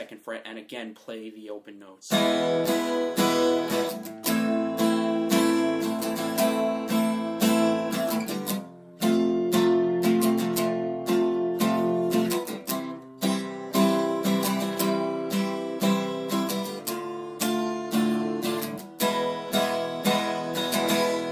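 Nothing here stands out as a technical fault; the audio just runs along steadily without any glitch, dropout or distortion to point to.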